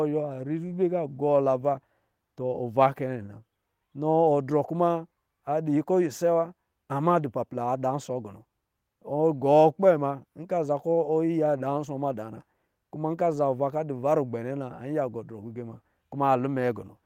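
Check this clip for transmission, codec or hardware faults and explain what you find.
Nothing in this speech recording points to a transmission, codec or hardware problem, so there's nothing to flag here.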